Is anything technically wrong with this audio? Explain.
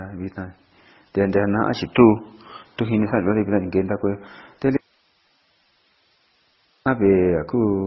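Yes, there are two faults.

Throughout the speech there is a transcoding between lossy codecs artefact: nothing survives above 5.8 kHz, with smeared, swirly artefacts from two different codecs layered together. This likely comes from a low-bitrate MP3 re-encoded as Opus, with the second codec spending bits on the first one's damage. On a spectrogram the content stops flat at 5.8 kHz, with blotchy gaps below.

From 4.77 to 6.86 s there is an audio dropout to a faint residue. The speech cuts off abruptly for about 2.1 s, leaving only hiss roughly 40 dB below the signal, likely because the signal was lost while the path after the break stayed live. The waveform collapses to a thin noise band with sheer edges at both ends.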